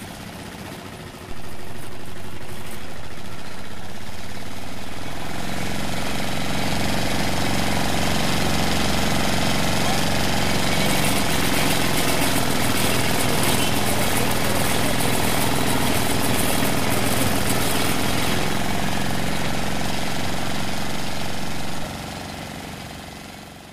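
At 1.31 s the signal's zero line shifts suddenly by a DC step of about -22 dBFS, as if the converter recalibrated or an offset input was switched into the path. The baseline stays displaced until 21.84 s, where it returns. Each jump in the baseline is heard as a brief low thump or click, while the sounds continue unchanged in character throughout the offset stretch.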